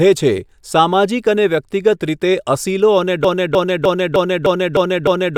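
At 3.24 s the speech stops advancing and a single fragment of about 305 ms starts repeating exactly, back to back, in a broken-record loop. It plays seven times and runs to the end of the clip at 5.38 s, so whatever should have followed is missing. The stutter has a steady rhythm of a little over three repeats per second. The likely cause is a player, encoder or stream that stalled and kept re-sending the last buffered piece.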